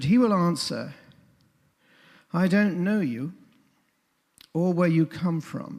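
Nothing is technically wrong with this audio.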